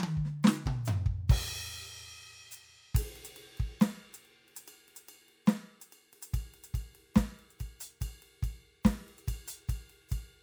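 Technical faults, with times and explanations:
No dropouts, clicks, distortion, level jumps or timing errors can be heard anywhere in the music.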